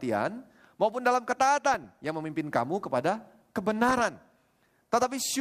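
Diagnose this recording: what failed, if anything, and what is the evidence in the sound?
DAB burbling at the broadcast codec stage: from 1.74 to 2.06 s, just after "maupun dalam", and from 3.88 to 4.17 s, the speech burbles with short noise blips. Uncorrected bit errors corrupt MP2 scale factors, making sub-bands jump in level for up to a frame. Unlike packet loss, nothing drops out or repeats.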